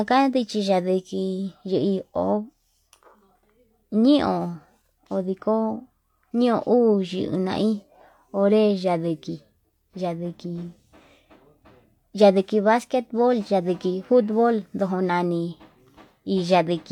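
Nothing to flag here; it's a speech recording, and no technical problems turn up anywhere in it.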